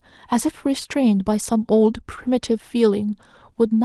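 A lost packet rebuilt from error correction at 0.91 to 0.93 s: a 20 ms stretch of the speech, consistent with one dropped packet, was replaced by the lower-bitrate copy carried in the next Opus packet, so there is no gap, only a brief rougher, noisier patch.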